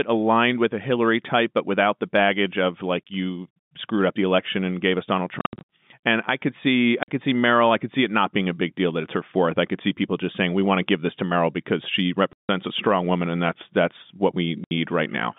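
Packet loss filled with silence cuts the speech four times: 5.39 to 5.68 s, where about 220 ms drops out in scattered gaps no longer than 70 ms; 7.03 to 7.08 s, between "I could see" and "could see"; 12.33 to 12.49 s, after "because she"; and 14.64 to 14.71 s, after "and that's that's what". Each missing stretch is replaced by dead silence, and the gap lengths fit 10 ms packets. The waveform shows flat blocks with sheer edges, and the spectrogram shows empty vertical slots with thin broadband lines at each edge, within the narrow 150 to 3600 Hz telephone band of the G.711 line.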